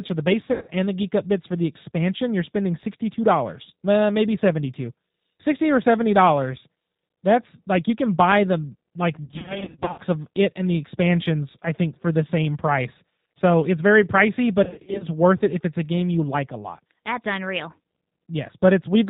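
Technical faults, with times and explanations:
Throughout, G.729 codec. The speech is plainly rough and synthetic. Nothing above 4 kHz survives, so the sound is dull and narrow. The codec rebuilds each short frame from a vocal tract filter, a pitch predictor and a few pulses, and the result fits an 8 kbit/s G.729A stream. That coarse model cannot carry fine detail, so the voice takes on a buzzy, processed texture.
0.52 to 0.71 s, 9.24 to 10.00 s, and 14.64 to 15.05 s, VoIP packet loss concealed by the speech codec. Packets drop out in scattered bursts, with runs of up to 90 ms. The worst stretch spreads about 450 ms of gaps over 0.74 s. The decoder fills each gap by repeating its last pitch and filter at falling gain, so the speech smears into a fading buzzy tone or coloured noise. Each frame builds on the previous one, so the voice stays weak after packets return.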